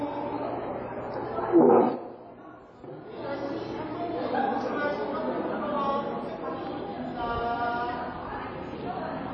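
From start to finish the audio sounds washy and smeared, with a hiss that swells and fades along with the sound itself, and nothing at all above 8.4 kHz, so the top end is dull and closed in. Likely cause is WMA compression at a low bitrate, which fits roughly 32 kbps: the long transform blocks spread quantisation noise across tens of milliseconds, and weak components are thrown away, leaving plainly audible codec damage.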